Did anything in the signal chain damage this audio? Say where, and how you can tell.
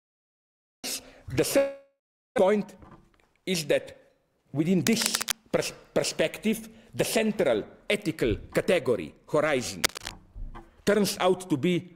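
Yes. There are three kinds of damage, at the network, buffer and analogue stages.

A long network dropout runs from 1.57 to 2.40 s. Audio stops arriving, and the receiver carries the last sound forward as a fading buzz or hiss for about 0.8 s. That includes roughly 360 ms of silence. When the audio returns, about 600 ms of it is simply gone. A network outage is the likely cause, and the delay shifts by around 200 ms across the gap.

Jitter buffer speed-up follows at the buffer stage, from 2.48 to 3.43 s at 110% speed and from 3.93 to 4.62 s at 112%. The pitch stays the same while the audio sounds hurried. The buffer holds more than its target. It trims short pitch-period pieces again and again, removing about a tenth of a second in each stretch.

Cable scratch noise appears at 4.79 to 5.35 s and at 9.83 to 10.11 s. Dense, irregular bursts of scratching sit about 5 dB below the signal. This points to the analogue wiring, likely a worn cable, connector or control carrying a DC voltage. 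When it moves, its contact resistance jumps around rapidly, and the result is this rustling over the audio.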